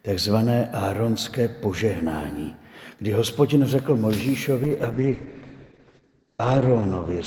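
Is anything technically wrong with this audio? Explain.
Yes. From 4.65 s to the end, a call bitrate drop sets in. The bandwidth estimate collapsed, which fits a fall from about 128 to 9 kbps. Coarser coding and a 20 kHz to 8 kHz cut-off make the sound rough and muffled. A spectrogram shows a flat ceiling at 8 kHz.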